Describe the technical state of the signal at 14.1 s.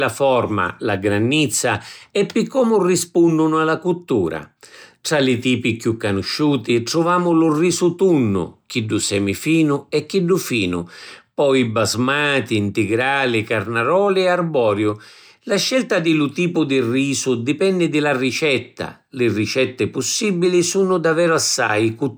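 At 14.1 s the speech signal is intact, with no dropout, distortion, glitch or other technical fault at that moment.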